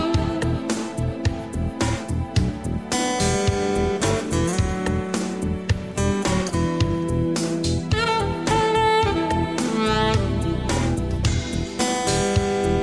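No technical faults can be heard anywhere in this recording.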